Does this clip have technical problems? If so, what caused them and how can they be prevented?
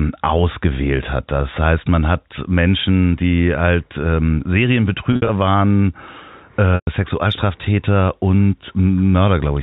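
Yes. Around 5.13 to 5.29 s the speech briefly turns held and buzzy, then thins toward silence before resuming. At 6.75 to 6.87 s it stalls and fades again. This is packet loss with pitch repetition. Audio went missing, about 110 ms scattered across 160 ms in the first event (the longest continuous gap being 60 ms), and 120 ms in the second, which fits 10 ms packets. The receiver covered each gap by looping the last pitch period and fading it out. The narrowband G.711 telephone sound itself carries through cleanly. Prevention: give the call a more reliable network path with quality-of-service priority and a suitably sized jitter buffer, or add forward error correction or redundant packets so lost audio can be rebuilt.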